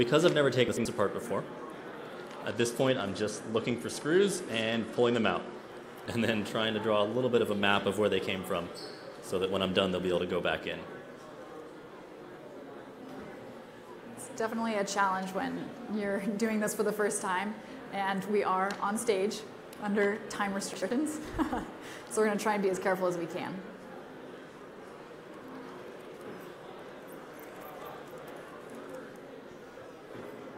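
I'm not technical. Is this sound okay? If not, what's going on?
No. Around 0.68 to 0.85 s, 5.72 to 6.06 s and 20.74 to 20.91 s, chunks play out of order: short pieces arrive late, causing jumbled moments. Unlike a dropout, nothing goes missing.

From 2.48 to 5.55 s, a Bluetooth SBC bit pool drop makes the sound dull and gritty, not just muffled, until the wireless link recovers.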